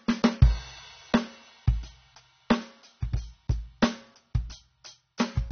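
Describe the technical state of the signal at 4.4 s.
At 4.4 s the music shows AAC compression damage, as it does throughout the clip, likely from AAC-LC. Nothing sounds above 6.3 kHz, and the codec damage is plainly audible, which fits a low bitrate near 24 kbps forcing the encoder to drop high bands.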